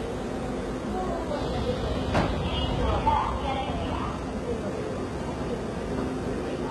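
From start to finish the treble sounds heavily processed: the top end is gritty and metallic, and nothing is present above about 11.8 kHz. This likely comes from HE-AAC compression at a very low bitrate, near 16 kbps, where upper bands are copied from lower ones rather than coded.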